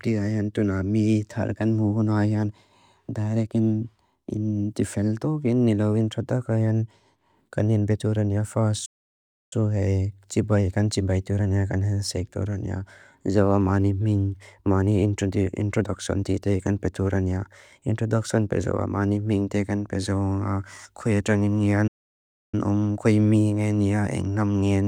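At 8.85 s and 21.87 s the speech drops to silence for about 0.66 s, then resumes: playback stalls, likely from the player running out of data.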